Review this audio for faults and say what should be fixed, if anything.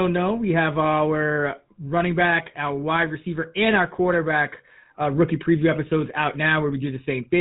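GSM full-rate codec throughout: nothing above 3.8 kHz, plus a buzzy, gravelly roughness from pulse-driven vocal-tract modelling, unlike plain low-pass filtering's clean dullness. Avoid it by recording or transmitting over a wideband path rather than a GSM voice channel.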